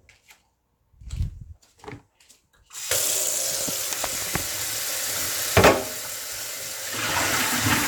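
Everyday sound with repeated frames at 5.23 to 5.25 s. A 23 ms block plays twice, which fits one compressed frame sent again. It causes a brief stutter and adds 23 ms.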